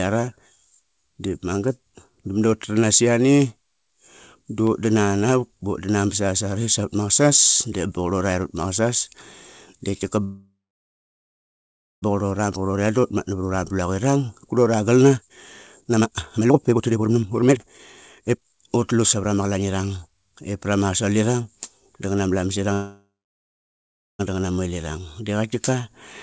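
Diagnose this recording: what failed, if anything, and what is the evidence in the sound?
Call audio freeze at the network and jitter buffer stage: from 10.24 to 12.04 s, and from 22.73 to 24.21 s between "ipra ma asolivang danganama" and "danganama wellirang di qatkiqa", the sound decays into silence for about 1.5 s and 1.1 s. It then resumes intact, likely because delayed packets starved the buffer.

Jitter buffer speed-up at the receiver buffer stage: at 15.16 to 15.37 s the speech runs at 167% speed, and from 15.81 to 19.66 s at 143%, with pitch unchanged and delivery hurried. Around 1.65 s of pitch-period fragments are cut to drain the backlog.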